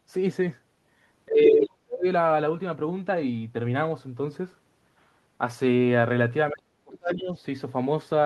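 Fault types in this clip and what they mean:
speech suppressed in double talk: twice the speech drops steeply, about 40 dB, for most of a second, likely an echo canceller muting the talker during simultaneous speech.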